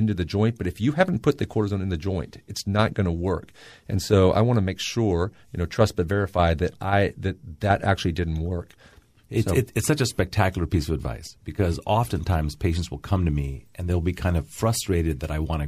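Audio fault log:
Nothing stood out on listening to this speech recording.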